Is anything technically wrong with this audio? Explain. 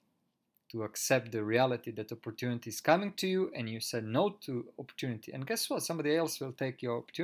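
No, nothing technically wrong can be heard anywhere in this speech recording.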